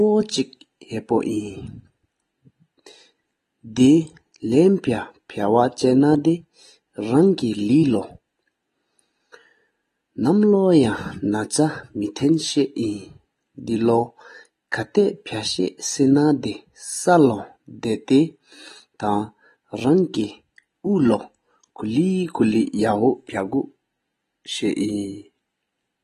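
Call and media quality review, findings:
AAC compression, likely low-bitrate AAC-LC encoding, consistent with about 32 kbps, throughout the speech. Coder drops content above 12.5 kHz and starves bands of bits. Sound dull, top end missing, sibilants fizzy, sustained sounds warbling; damage plainly audible.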